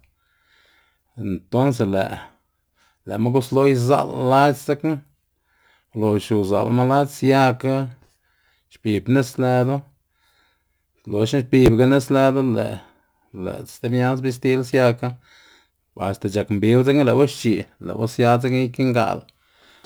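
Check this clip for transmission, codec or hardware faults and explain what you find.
One fault runs through the whole clip: crude rate conversion. Throughout, the speech carries a gritty, inharmonic fizz, roughly 30 dB down, that tracks loud and bright syllables. It fits a 48 kHz to 44.1 kHz change done by picking nearest samples, whose repeating timing error creates unrelated tones. Unlike codec artefacts, it neither swirls nor smears; it buzzes steadily with level.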